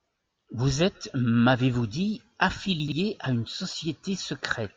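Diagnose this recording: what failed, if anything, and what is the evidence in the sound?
Chunks out of order at the buffer stage, 2.8 to 2.92 s, just before "à une": a 40 ms chunk plays two chunks late, producing a jumbled moment with three hard joins.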